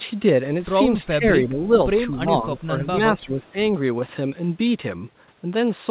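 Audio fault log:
1.02–1.25, 1.49–1.71, 2.23–2.29, 2.57–2.86 and 3.25–3.47 s, speech suppressed in double talk: the talker briefly dips by about 5 to 15 dB, deepest in 2.57–2.86 s. Both ends likely spoke together, and the echo canceller, unable to separate them, attenuated the near talker.
3.48–3.52 s, echo leak: a faint scrap of the voice returns about 304 ms late, roughly 35 dB below the speech and band-limited to 4 kHz like the rest of the call. A speakerphone's echo canceller likely failed to remove all of its own playback.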